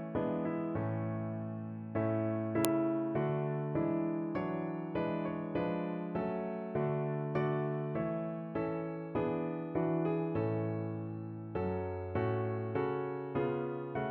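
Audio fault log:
2.65 s, file header played as audio: there's a sharp, loud snap right here, cutting in no matter what the audio around it is doing. That's what you get when pieces of a WAV stream are butted together without stripping the header, so a few dozen bytes of file metadata get read as sample values. Those bytes jump to wild amplitudes for an instant, and the ear hears it as a hard click marking the join.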